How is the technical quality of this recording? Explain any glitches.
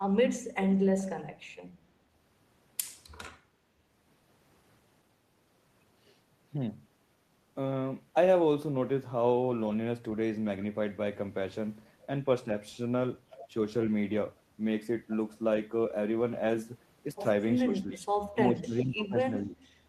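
The recording has one recurring glitch near the end: speech suppressed in double talk, at 17.62–18.03 s, 18.32–19.15 s and 19.44–19.54 s. The level sags sharply, by roughly 20 dB in the first two and about half that in the last. The cause is likely an echo canceller that mistook the talker for returning loudspeaker echo while both sides spoke, and turned it down. Unlike packet-loss dropouts, these come from the voice being turned down, not from lost audio.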